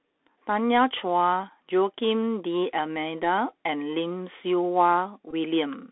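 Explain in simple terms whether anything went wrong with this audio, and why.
The speech sounds thin and muffled, with scratchy s sounds and a grainy hiss throughout. This is the Bluetooth CVSD headset codec, which keeps only roughly 300 Hz to 3.6 kHz and tracks the waveform in small adaptive steps.

From 5.31 to 5.34 s there is a brief buzzy stutter. A Bluetooth headset packet was repeated: when a few packets were lost, the headset replayed the last one, which fits about 15 ms of missing sound.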